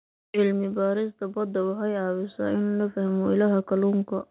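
From 1.33 s to 4.13 s, automatic gain rising lifts the level by about 7 dB; voice and background swell together, unlike compression pumping, through telephone-band audio ending at 4 kHz.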